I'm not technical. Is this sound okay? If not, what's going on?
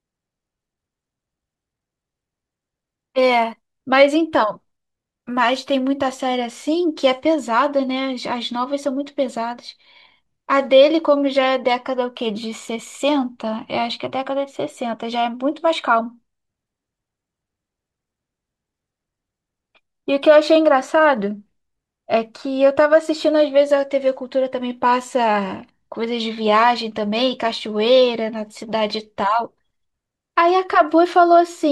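Yes, no faults heard.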